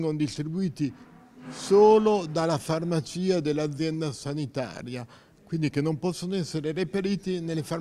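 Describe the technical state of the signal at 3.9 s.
At 3.9 s the signal is intact, with no audible dropout, clipping, distortion or other technical fault at that moment.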